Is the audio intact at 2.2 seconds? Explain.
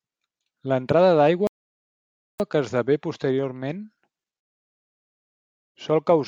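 No, the speech drops to silence from 1.47 to 2.40 s, then resumes intact at "que esdevé posteriorment": a rebuffering stall, the player waiting for data, adding 0.93 s.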